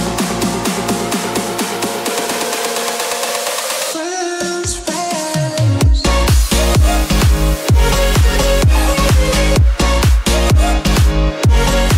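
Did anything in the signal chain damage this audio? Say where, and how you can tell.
No, nothing in the signal chain has damaged this audio. No stage, from capture through conversion, transmission, storage or playback, has left any mark on the sound.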